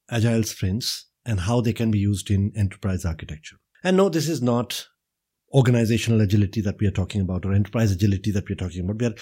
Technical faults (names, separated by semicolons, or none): none